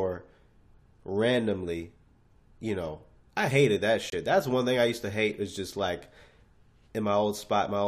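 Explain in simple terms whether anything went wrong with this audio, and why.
At 4.10 s a corrupt frame muted fault cuts the speech for about 0.04 s: a few damaged compressed frames were rejected and replaced with silence.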